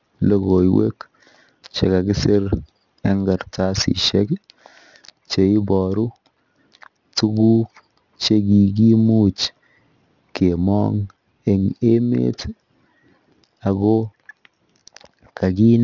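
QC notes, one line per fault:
throughout: aliasing, with content above 6 kHz folded back down as gritty, metallic sibilants roughly 20 dB under the speech, unlike a clean low-pass's dull top; fits resampling to 12 kHz without filtering.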